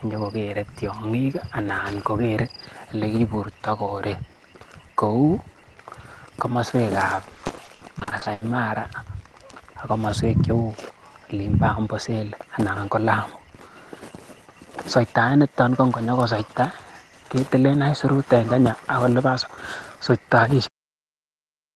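From 7.15 s to 8.43 s, repeated packet loss (robotic sound) makes the speech choppy, with pieces missing. Roughly a third of that stretch is concealed by extending previous sound, with gaps up to 80 ms. At 20.67 s the audio has a cut-off end: speech stops mid-sound and drops straight to digital silence, because the final buffers were never played. This happens over a call path whose highs roll off near 12 kHz, consistent with a low-bitrate Opus stream.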